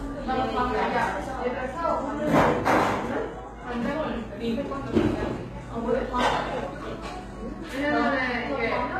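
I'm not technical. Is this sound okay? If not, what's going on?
No. HE-AAC compression is audible throughout the clip and is likely the cause. The treble above a crossover is rebuilt from copied lower sound rather than stored, so it sounds gritty and metallic, and nothing remains above about 14.9 kHz.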